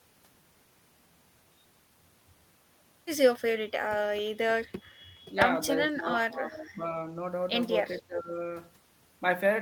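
The speech dips at 5.28–5.35 s, 5.86–6.85 s and 7.98–8.37 s, losing around 10 to 15 dB. This is speech suppressed in double talk, likely an echo canceller mistaking the talker for loudspeaker echo and attenuating both.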